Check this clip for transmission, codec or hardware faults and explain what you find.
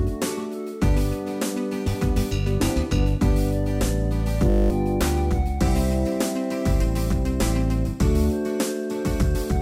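One fault is present, a system hang loop from 4.5 to 4.7 s. The host or driver stalled while the audio hardware kept replaying the same 20 ms stretch of its ring buffer, about ten times in a row. Because the buffer is so short, the repetition fuses into a steady 50 Hz buzz rather than a stutter, and roughly a fifth of a second of the real audio never arrives in its place.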